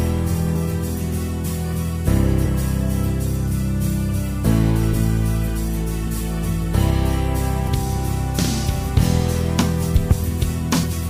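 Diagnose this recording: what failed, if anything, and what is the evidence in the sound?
Codec-stage failure: compressed frames skipped. The sound jumps forward at 0.55, 2.45, 4.93 to 4.96, 6.07, 7.67 to 7.69, 9.61 to 9.64 and 10.83 s. Each jump loses roughly 70 to 200 ms, consistent with whole 20 ms frames dropped.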